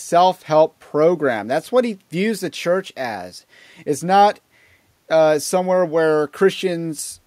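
Speech recording with no technical faults to report.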